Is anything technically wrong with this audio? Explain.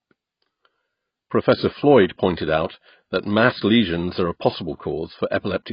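Yes. Throughout, the speech shows heavy AAC compression, likely coarse AAC-LC quantisation at a rate consistent with about 16 kbps. Nothing remains above 5.1 kHz, and sibilants warble and smear, unlike a clean low-pass filter.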